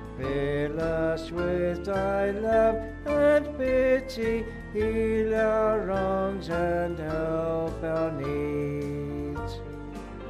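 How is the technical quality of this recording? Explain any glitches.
There are no glitches to explain in this recording. Nothing in the audio points to a technical problem at any moment.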